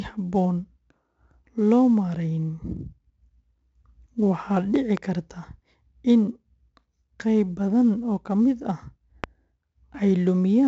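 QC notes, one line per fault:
throughout, 4-bit ADPCM compression: heavy gritty hiss rides every loud syllable and rises and falls with the speech, with roughness on sharp onsets where the step size lags. Nothing is present above 7.8 kHz, consistent with a 64 kbps stream. Unlike steady background noise, the hiss tracks the signal level.
4.76–4.99 and 9.24–9.26, loud pop: a double pop in the first span and a single pop in the second, peaking roughly 10 and 15 dB above the speech, which continues underneath. These are likely voltage spikes from a plug, switch or static. They are not dropouts, since no audio is lost.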